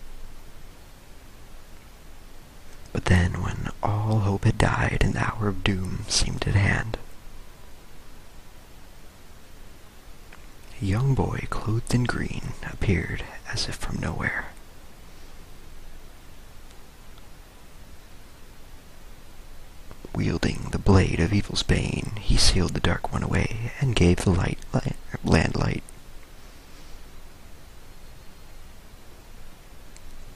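No technical faults are audible.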